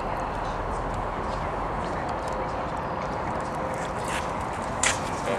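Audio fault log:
2.44 s, compressed frames skipped: the sound jumps forward by roughly a fifth of a second, consistent with about seven whole compressed frames of 26.1 ms each never reaching the output, either missing from the stream or rejected by the decoder as damaged. Adjacent frames overlap when decoded, so the join is a short smeared blip instead of a sharp click. Unlike a dropout, no silence is inserted. The material simply resumes further ahead.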